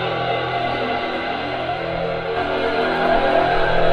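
No technical faults can be heard anywhere in this audio.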